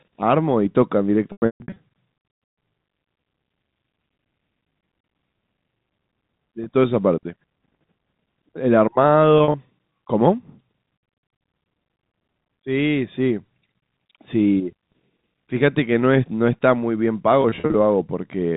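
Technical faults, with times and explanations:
1.32–1.76 s, 6.64–6.66 s, 9.38–9.54 s, 17.42–17.74 s, packet loss with pitch repetition: about 340, 20, 80 and 160 ms go missing and are bridged by repeating the last pitch period, giving a held, buzzy sound. The first event's 140 ms run outlasts the roughly 50 ms fade and drops to silence. A spectrogram shows frozen, flat harmonics, and the waveform shows identical repeated cycles tapering away.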